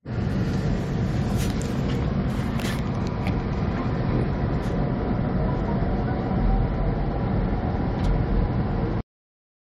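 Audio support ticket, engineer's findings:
Damaged data in a compressed stream at 2.23 s. Short glitch in the everyday sounds. Probable component: file or stream transport feeding the decoder. Corrupt bytes in the frame data; the decoder misreads the affected frame, loses sync and resumes at the next valid frame header.

Cut-off end at 9.01 s. Sound stops mid-event and drops straight to digital silence with no decay. Probable component: output or write path at end of stream. Final buffers never written or played out, so the tail is missing.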